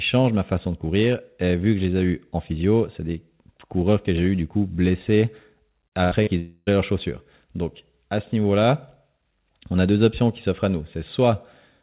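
Speech, band-limited with nothing above 4 kHz, which fits a narrowband G.711 mu-law call path, and it breaks up in a tight cluster between about 5.9 and 6.7 s. Right after "eu du coup blessés", short concealed packet loss hits from 5.88 to 5.95 s, and again from 6.23 to 6.30 s. Each time about 40 ms of audio never arrived and the receiver extended the preceding sound for roughly 37 ms before blending back. What separates these from the burst is length: they are brief smears or wobbles.

Between them, from 6.04 to 6.14 s, a burst of packet loss removes about 80 ms. Here the concealment runs for about 74 ms and is turned down as it goes, so the gap comes out as a held, dimming buzz or hiss rather than a quick smear, and the speech picks up a little further on.

Last, from 6.39 to 6.70 s, comes what is likely a long network dropout, just before "leurs chaussures". About 280 ms is lost. The filler runs for roughly 279 ms and decays to about 20 ms of silence before the audio resumes. 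The sign that sets it apart from the burst is the fill outlasting a quarter second and fading all the way out to nothing.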